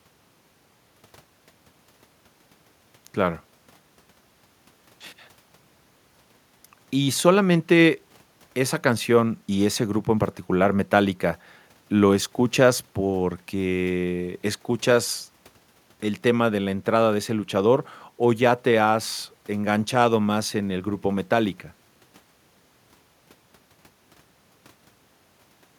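A speech recording, and nothing is technically wrong with it.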